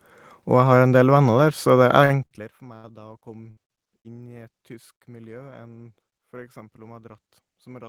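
From 2.05 to 5.03 s the speech breaks up with repeated packet loss (robotic sound). There are seven dropouts, the longest about 70 ms, each patched by stretching the last bit of sound. You get a choppy stutter with small pieces missing.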